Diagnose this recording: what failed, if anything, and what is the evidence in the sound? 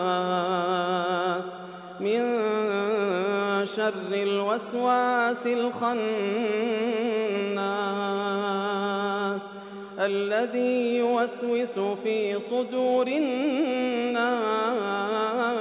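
Nothing failed here: the band-limiting with nothing above 4 kHz is simply what a G.711 mu-law call path at 64 kbps does to the sound.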